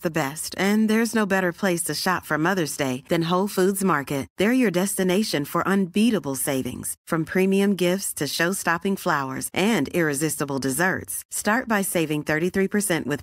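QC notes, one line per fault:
No faults heard.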